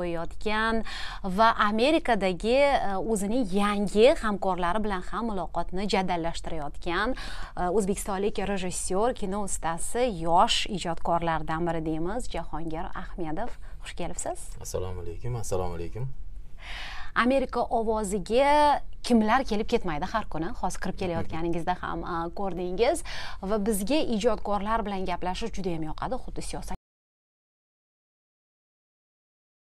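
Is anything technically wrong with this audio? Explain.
Yes. From 26.75 s to the end, the audio drops out to silence, likely because the input was lost while the recorder kept writing silence. The sound stops abruptly and no room tone remains; the waveform flattens to a line and the spectrogram goes blank.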